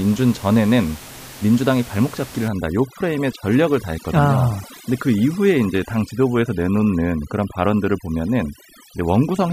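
From 2.48 s to the end of the clip, the speech suffers from overdone noise removal. A noise reducer is working far too hard. It pulls individual frequency bands down or shuts them off whenever they sit near its noise estimate. The soft edges of the speech are cut along with the noise. The room noise, about 18 dB below the speech before this point, drops and breaks up into twinkling specks.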